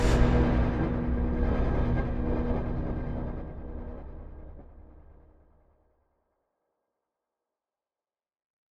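Nothing is technically wrong with this audio clip.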